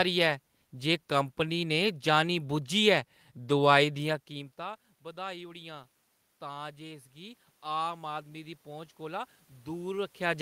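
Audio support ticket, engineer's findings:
Automatic gain rising, 4.1 s to end of clip. Speech level drops about 20 dB at the mic around 4 s, consistent with talker moving back. AGC reads input as too quiet and ramps gain up gradually, so voice and room noise swell together over the following seconds rather than stepping back. Component: capture-side AGC. Gain still climbing at 10.4 s; second talker movement near 10 s.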